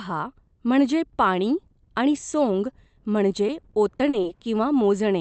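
From 3.47 to 4.25 s the speech turns choppy, with small pieces dropping out five times over that stretch and the gaps filled by a smeared, held-over tone. This is repeated packet loss: packets went missing or arrived too late again and again, the longest gap about 40 ms, and each hole was patched by stretching the preceding sound, so roughly an eighth of the span is concealment rather than real audio. It plays through an Opus call path whose band stops near 8 kHz.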